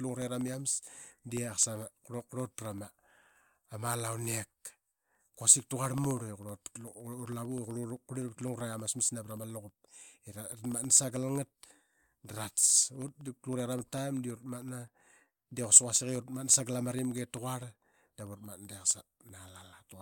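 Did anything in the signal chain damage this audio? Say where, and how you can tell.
Yes, at the driver or USB stage: periodic USB or driver dropouts run from 0.09 s to 19.93 s. Every 64 ms, roughly half a millisecond drops to silence, ticking evenly under the speech. The waveform shows tiny flat gaps, and the spectrogram shows evenly spaced, thin, broadband vertical lines.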